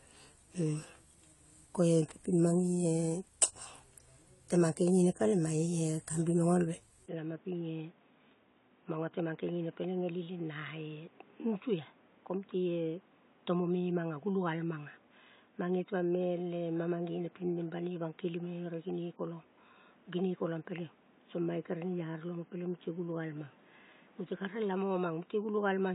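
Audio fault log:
throughout AAC compression: Nothing above 11.5 kHz, and smeared, fizzy sibilants. This is likely low-bitrate AAC-LC coding, around 32 kbps, stripping and approximating high bands.
7.06 s to end, input switched to a poorer device: After a 20 ms gap, the speech turns boxy and quieter by around 5 dB. Nothing passes above 3.8 kHz, and a new faint noise floor appears. This is likely a narrower-band microphone taking over.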